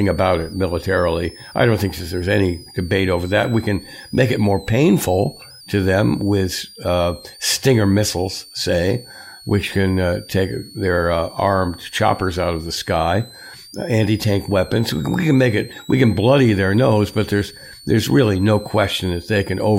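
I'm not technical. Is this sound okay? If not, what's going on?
No. A thin, high whistle, roughly 4 kHz and wandering between 3.6 and 5.3 kHz, sits quietly behind the speech for the whole clip. This is switching supply whistle from a switching power supply. Unlike mains hum, it is high-pitched rather than low, and its pitch drifts.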